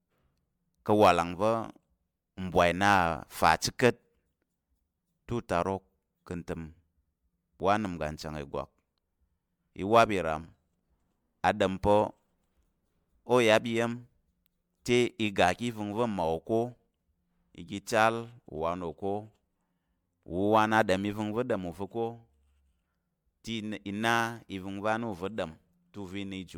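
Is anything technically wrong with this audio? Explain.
Yes, there is generation loss throughout the speech. The clip was likely run through MP3 encoding and decoding roughly seven times, each pass near 112 kbit/s. Every pass re-quantises the signal on a shifted frame grid, so coding noise and spectral holes pile up. The result sounds swirly, hollow and smeared, more damaged than a single encode at that rate would be, with consonant attacks blurred. Content stops at 20 kHz.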